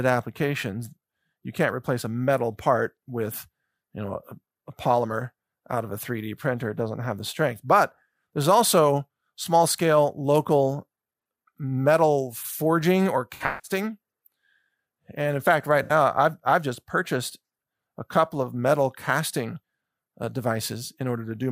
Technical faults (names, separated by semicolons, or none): AAC frame loss with concealment